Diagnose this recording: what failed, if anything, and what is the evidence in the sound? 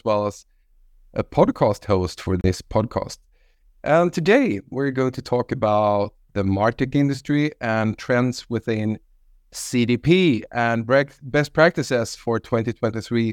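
A likely Bluetooth dropout on the wireless playback link: at 2.41 s, just after "a podcast host for", speech cuts to silence, about 30 ms missing, then resumes mid-flow.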